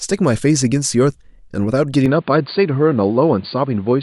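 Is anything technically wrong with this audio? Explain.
Yes. From 2.06 s to the end, the speech suddenly turns duller and boxier, with nothing above 4.7 kHz and a faint new background noise about 35 dB below the speech. This is likely an input switched to a poorer device: the recording moved to a narrower-band microphone path with its own tone and noise. On a spectrogram, the upper band vanishes abruptly at 2.06 s. The waveform shows no gap and no clear level step at the switch.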